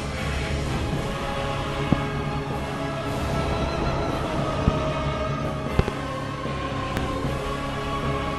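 Loud pops at 1.93–1.95, 4.68–4.70, 5.79–5.90 (a double) and 6.97–6.99 s, roughly 20 dB above the sound, are sharp thumps, likely voltage spikes from switching or static.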